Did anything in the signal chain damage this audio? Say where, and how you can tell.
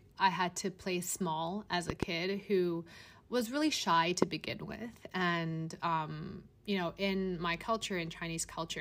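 Yes. Loud pops sit on top of the speech in two places: a double pop between 1.90 and 2.05 s peaking about 15 dB above the speech, and a single, stronger pop from 4.22 to 4.25 s, about 20 dB up. The speech carries on underneath both. The likely source is the analogue wiring or electrical side, where a sudden voltage step from a plug, switch or static discharge got added to the signal and was then shaped by the circuits after it. On a waveform each pop is a tall, narrow spike standing well clear of the speech envelope. On a spectrogram each appears as a thin vertical stripe spanning the whole frequency range.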